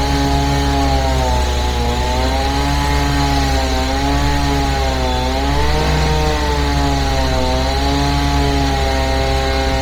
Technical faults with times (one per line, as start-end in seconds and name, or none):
0.00-9.81 Bluetooth LC3 compression